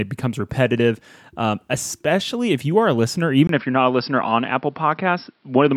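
Input switched to a poorer device, at 3.47 s: after a 20 ms gap, the speech runs to the end with nothing above 5.5 kHz, turning dull, with a faint new noise floor and unchanged level. The recording's input likely moved to a narrower-band microphone.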